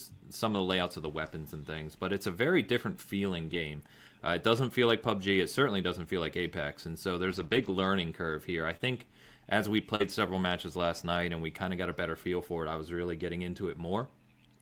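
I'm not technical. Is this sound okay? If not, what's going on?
No. There are two kinds of problem, both caused by bits of the audio going missing on their way across the network.

The first is a lost packet rebuilt from error correction. This happens four times: at 0.49 s, just before "of the layouts of"; at 3.49 s; at 4.57 s; and at 13.19 s, right after "it I was really". Each time, a small chunk of audio was lost, but a rougher backup copy had been sent along with the next chunk, so the missing piece was filled in from that copy. You won't hear any silence. Instead, the sound turns briefly grainy and noisy for about 20 to 40 thousandths of a second.

The second is scattered short gaps, spread between 7.31 and 10.09 s and ending just before "several matches last night". There are about three small holes here, the longest roughly 40 thousandths of a second. No backup copy existed for these, so the receiver stretched out the sound that came just before each one. 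What you hear is a small tick, smear or hiccup rather than a patch of rough, noisy sound.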